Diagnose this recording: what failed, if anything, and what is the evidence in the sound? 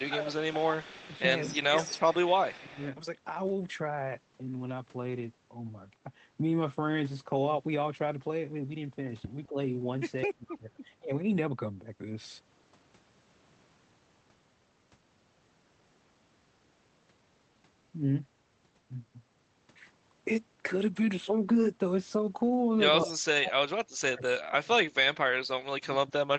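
Speech suppressed in double talk, likely from call processing: level dips up to about 35 dB at 0.0–2.81, 9.48–9.57, 10.25–11.1, 23.03–25.42 and 25.74–26.24 s, shown as gouged waveform envelopes.

Echo leak, likely in the echo canceller: a repeat 209 ms behind the voice, about 10–25 dB down, at 0.0–2.84, 10.49–10.56 and 23.04–23.19 s, appears as offset spectrogram copies.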